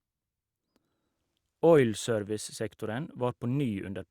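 No technical faults occur anywhere in the recording.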